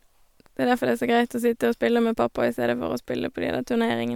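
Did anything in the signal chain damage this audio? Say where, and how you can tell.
No, nothing in the chain damaged it.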